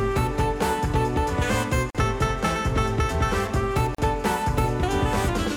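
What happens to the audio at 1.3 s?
Nothing goes wrong at 1.3 s; the audio carries on intact through that moment.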